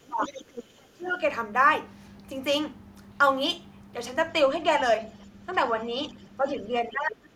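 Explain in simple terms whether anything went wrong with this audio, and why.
Two problems can be heard here, both tied to a call where the two sides talked at the same time.

The first is speech suppressed in double talk. From 0.00 to 0.38 s, from 0.72 to 1.22 s, and from 6.37 to 7.23 s, the talker's speech dips sharply. The likely cause is the echo canceller. It couldn't tell the talker apart from the sound of the other side, so it turned everything down, sometimes for about half a second at a time.

The second is the other side's voice leaking through. From 0.22 to 0.64 s, a second, fainter voice can be heard under the talker. It's clearly quieter. A much fainter scrap shows up again from 5.21 to 5.26 s. This likely happens because the talker's device plays the other side on a loudspeaker, and the microphone picks it up again. The echo canceller didn't remove all of it.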